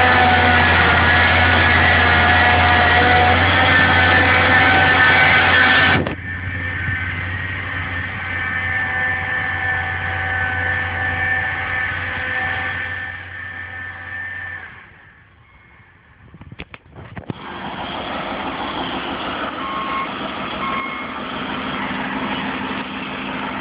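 From 12.67 to 13.31 s a fast ticking zips across the sound as it drops about 10 dB. This is zipper noise: the level fell in 1 dB steps, around fifteen per second, without smoothing.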